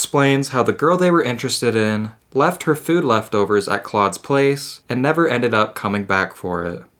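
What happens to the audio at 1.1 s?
Nothing goes wrong at 1.1 s; the speech runs through that moment intact, with no break, click or distortion.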